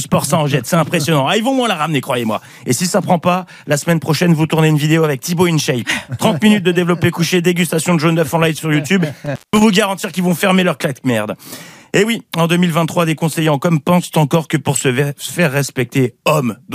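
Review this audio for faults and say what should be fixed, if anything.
From 9.26 to 9.63 s the sound cuts out abruptly, with crackle at the edges of the dropout and faint hiss during the gap of roughly 179 ms. This is an intermittent contact: a loose cable or plug briefly breaks the signal path. Reseat or replace the suspect cable and connectors, and secure them with strain relief.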